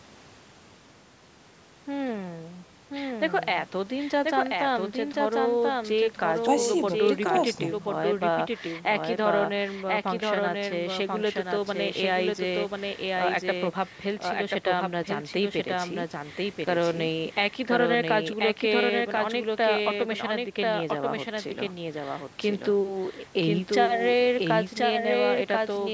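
Speech that passed through call microphone processing, with nothing above 8 kHz, carries a doubled audio track throughout. A full-band copy trails about one second behind at roughly 5 dB lower, likely from a second, slower capture path. On a spectrogram every speech pattern reappears a second later, crisp and undecayed, and the waveform shows each burst mirrored by a smaller twin.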